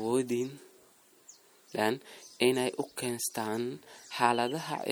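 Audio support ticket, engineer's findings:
MP3 compression, likely, whole clip. Speech sounds watery and swirly, sibilants chirp metallically. Encoder starved of bits, consistent with about 64 kbps, zeroing weak frequency lines frame to frame.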